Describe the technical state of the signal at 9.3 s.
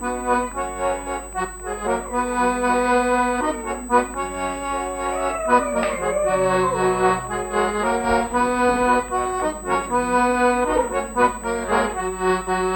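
USB whine is present at 9.3 s, as it is across the whole clip: a steady, fixed-pitch tone at 8 kHz sits under the sound, roughly 20 dB below the signal. The pitch points to the bus's 125-microsecond microframes, whose regular bursts of current draw leak into the audio path through shared power or ground, so the interference arrives as a thin, high, unwavering whine rather than broadband hiss.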